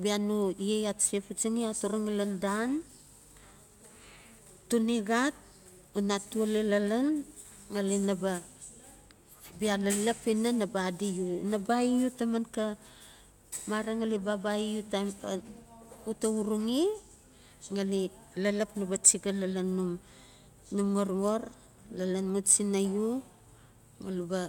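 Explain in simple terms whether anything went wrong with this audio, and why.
Nothing went wrong with this audio, so there is no fault to explain.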